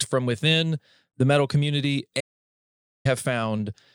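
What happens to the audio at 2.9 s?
At 2.9 s the speech is inside an audio dropout to silence running from 2.21 to 3.05 s, just after "within the metal community". The input was likely lost for about 0.85 s while silence was written. Unlike a natural pause, the gap holds no room tone.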